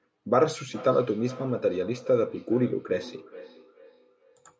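A speech recording with feedback echo between two devices from 0.67 s to the end at 4.6 s: a second device in the room replays this microphone's signal, which is picked up again, so each word returns as a thinner, ringing copy roughly every 0.4 s, peaking about 18 dB below the speech. Unlike room reverberation, the repeats are distinct copies at a fixed interval rather than a smooth decay.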